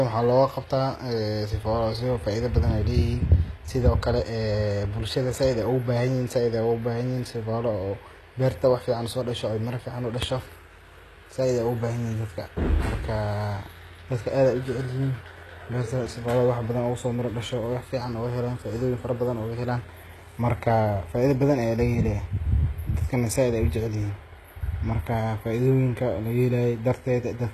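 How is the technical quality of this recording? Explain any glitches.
The recording has one fault running through the whole clip, HE-AAC compression damage that is plainly audible. The sibilants in the speech sound gritty and lispy, with nothing above 12.3 kHz. This is likely spectral band replication, which copies lower bands upward, and the bitrate is around 16 kbps. A plain low-pass filter would sound dull instead. Here the treble is present but metallic.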